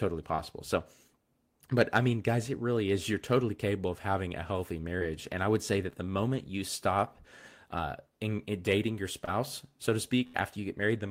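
At 0.35 to 0.40 s, 4.99 to 5.03 s and 9.25 to 9.29 s, short concealed packet loss: each time about 20 ms of the speech arrived too late to decode, and the receiver extended the preceding sound for roughly 21 to 25 ms, leaving a brief smear or wobble.

At 10.27 to 10.36 s, a burst of packet loss: around 60 ms failed to arrive in time, so the receiver stretched the last sound over 67 ms while fading it, heard as a held buzz or dying hiss before the speech resumes with a piece gone.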